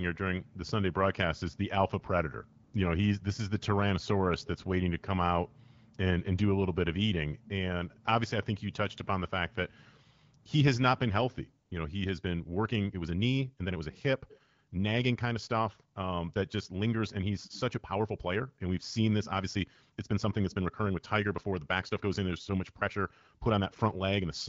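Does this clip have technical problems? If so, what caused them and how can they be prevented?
Yes. AMR comfort noise appears at 2.63–2.73 s (100 ms), 10.43–10.45 s (20 ms) and 11.65–11.71 s (60 ms). The phone judged those moments silent and stopped sending speech frames, so the receiver filled them with smooth synthetic noise. A dropout would leave silence or a glitch, but this gap is filled with a steady hiss that switches in and out. To prevent it, disable discontinuous transmission or make the sender's voice activity detection less aggressive.

From 12.01 s to the end, the pace jumps to about 1.35 times normal speed while the pitch stays put, giving a rushed time-stretched section. This was likely caused by software squeezing the audio to fit a length by dropping short pieces. A sped-up playback would raise the pitch, but here it does not. To prevent it, keep the recording at its native duration rather than retiming it.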